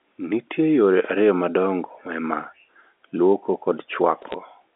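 A brief burst of sharp ticks and crackle from 4.22 to 4.34 s: bit errors on a digital phone line, a rare flipped bit corrupting individual samples.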